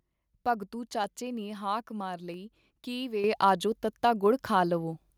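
From 1.04 s to about 4.93 s, clicks recur every 1.3 s, four in all. These are clock drift buffer slips. Two devices likely run on clocks a few hundred parts per million apart. The buffer drifts, then drops or repeats about 15 samples.

At 3.24 s, the microphone volume is stepped up. The voice and the background jump together by about 8 dB. The call software judged the input too quiet. It raised the device's input level in one abrupt step.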